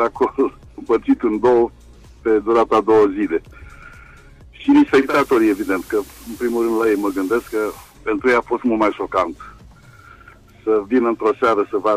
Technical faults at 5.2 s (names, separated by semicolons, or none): digital radio blending to analogue